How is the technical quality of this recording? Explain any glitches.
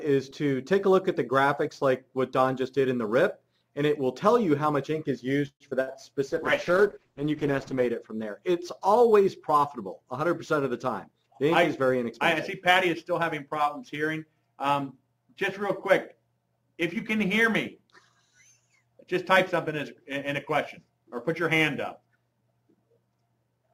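The recording has several network-call faults clustered between about 5.5 and 8 s, plus a speed-up later on.

From 5.47 to 5.62 s the last sound is held and fades, then about 70 ms of silence follows before the audio resumes exactly where it stopped. This is likely a call audio freeze: the jitter buffer ran empty waiting for delayed packets. Nothing is skipped, which is what separates it from packet loss.

From 5.70 to 5.73 s there is short concealed packet loss. About 20 ms of audio never arrived, and the receiver bridged the gap with a brief extrapolated smear.

From 5.81 to 5.97 s a burst of packet loss drops about 60 ms of audio. The receiver fills the gap with a fading continuation of the last sound, then jumps ahead. Unlike the freeze, material is actually missing here.

From 6.31 to 7.91 s a call bitrate drop pushes the encoder from 96 to 11 kbps, held at the lowest rate for about 1.5 s. 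The coarser coding makes the sound rough and dull until the bitrate recovers.

From 10.57 to 13.22 s a jitter buffer speed-up trims out around 150 ms in small pitch-period pieces. The audio runs at 105% speed, sounding hurried, while the pitch stays unchanged.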